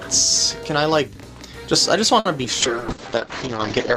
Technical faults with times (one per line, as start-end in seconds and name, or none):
2.19-2.27 short stall from a late packet
2.43-2.46 short concealed packet loss
2.62-3.97 call bitrate drop